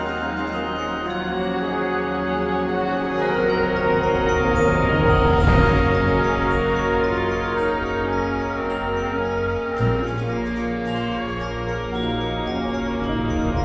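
No technical faults can be heard anywhere in this audio.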